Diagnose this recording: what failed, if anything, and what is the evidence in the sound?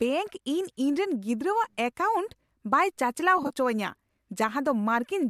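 Network delivery dropped AAC frames between 3.38 and 3.51 s, losing about 60 ms in bursts scattered over 120 ms, none longer than about 30 ms. In this AAC frame loss with concealment, the decoder rebuilt each gap from the last good spectrum, leaving a brief smeared, noisy, phasey flutter.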